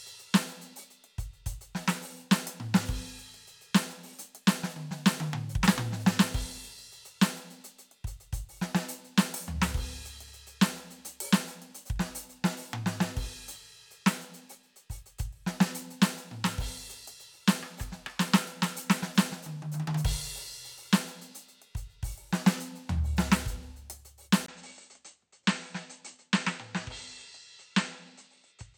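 At 24.46 s the music drops out for 20 ms, then returns quieter and duller, with nothing above 8.6 kHz: likely an input switched to a poorer device.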